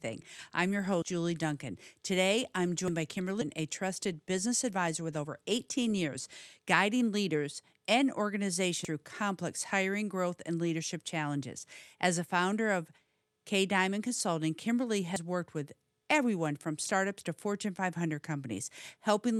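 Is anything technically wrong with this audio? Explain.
Yes. The audio has four jumps at 1.02, 2.88, 8.85 and 15.16 s. Each is a jump with the sound leaping ahead, with no silence. At 8.85 s roughly 200 ms is gone; the others lose about 100 ms. The likely cause is a dropped buffer (overrun). The hardware overwrote samples before the program collected them.

At 3.41 s there is a skip ahead. About 400 ms of audio was discarded while later audio was already waiting. Playback jumps forward with no gap, and the two sides are joined almost directly.

From 3.59 to 6.09 s, and again from 6.59 to 7.09 s, there is a jitter buffer speed-up. The receiver trimmed short pitch-period pieces to cut excess delay. The sound runs about 7 to 8 percent fast at unchanged pitch and feels hurried.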